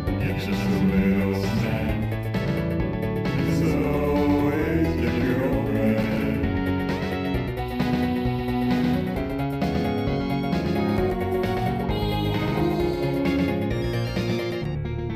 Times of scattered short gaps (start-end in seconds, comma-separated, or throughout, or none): none